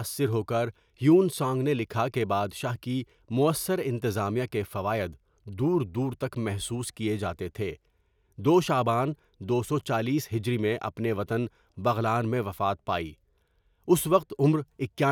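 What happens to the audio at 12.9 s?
Nothing goes wrong at 12.9 s: the speech runs on intact through that moment, with no dropout, click, distortion or other fault.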